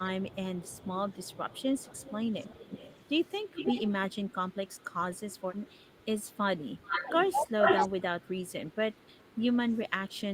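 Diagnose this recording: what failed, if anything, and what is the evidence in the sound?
Echo leak, in call processing: a delayed copy of the speech returns at 0.29–3.08 s (273 ms behind, about 20 dB down), 3.52–4.15 s (315 ms, only about 5 dB down), 4.72–4.84 s (315 ms, very faint), 6.83–7.88 s (413 ms, roughly as loud as the speech) and 8.73–9.29 s (413 ms, faint). The likely cause is a far-end loudspeaker echo the canceller failed to remove. Unlike room reverberation, this is a distinct repeat at a fixed lag, not a smooth decaying tail.

Speech suppressed in double talk, also in call processing: the speech dips sharply at 7.03–7.66 s, by as much as about 30 dB over roughly 300 ms in pieces, and briefly at 9.20–9.27 s, by about 20 dB. Both dips fall inside the echo stretches, which points to the likely cause: the canceller could not separate the talker from the returning echo and turned both down. 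Packet loss would bring gaps or concealment artefacts unrelated to the echo. Here the losses are gain drops that track the overlap.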